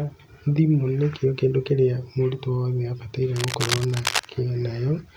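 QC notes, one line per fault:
3.36–4.27 s, cable scratch noise: dense, uneven scratching and rustling bursts sit over the speech for almost a second, only a few decibels below it. Likely a worn cable, connector or control being moved, its contact resistance fluctuating rapidly.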